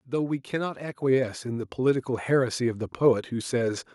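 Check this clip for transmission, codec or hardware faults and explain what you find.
One hardware-side fault is present: the microphone volume stepped up at 1.02 s. At that moment the whole signal jumps louder by about 5 dB in a single step. Software judging the input too quiet raised the device's input gain all at once. The sound gets abruptly louder. What separates this from a talker simply projecting more is that the background noise floor rises by the same amount at the same instant. Unlike a gradual automatic gain ramp, the change is immediate and then holds steady.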